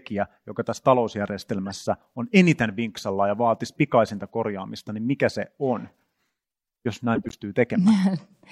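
At 1.66 to 1.72 s, just before "on eniten vinksalla ja", a corrupt frame decoded gives a short squeaky blip, peaking at about -25 dBFS. At 7.15 to 7.36 s a longer, louder burst follows, at about -10 dBFS. Flipped bits in compressed frames were played anyway. Misread gains and codes put energy at the wrong frequencies. The lengths suggest a few damaged frames in the first case and several more in the second.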